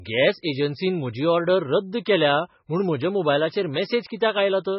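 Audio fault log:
Throughout, MP3 compression: a hard ceiling with nothing above 5.6 kHz and a heavy watery, swirling texture, likely from an encoder starved of bits at around 16 kbps that cuts the treble and switches weak bands on and off. A spectrogram shows a flat cutoff and patchy holes below it.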